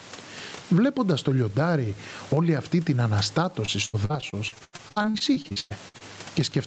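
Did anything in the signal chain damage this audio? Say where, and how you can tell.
Yes. Gain pumping runs through the whole 6.7-second speech clip, at the capture and call-processing stage. The level moves by roughly 15 dB. The likely cause is input gain set far too high for the microphone, so a fast limiter or compressor keeps clamping down on loud sounds and then releasing. Loud and quiet passages end up squeezed close together.

Repeated packet loss (robotic sound) appears from 3.65 s to 6.02 s, at the network stage ahead of the jitter buffer. Across that stretch the sound turns choppy, with more than twenty short holes, the longest about 0.1 s. Each hole is bridged by extending the last received sound, and the next hole arrives soon after. About a third of the span is patched audio and about 0.8 s is simply missing. The Opus path's cutoff at 8 kHz is ordinary band-limiting and not a fault.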